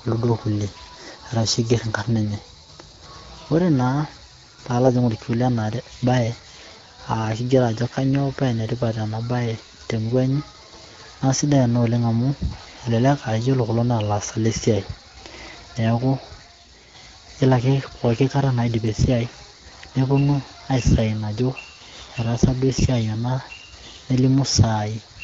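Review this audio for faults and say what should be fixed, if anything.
Nothing here needs fixing; no faults are audible.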